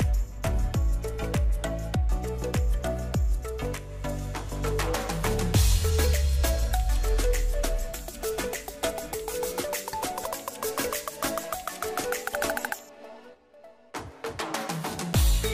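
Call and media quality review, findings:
No faults found on listening. Nothing to log against any component for this clip.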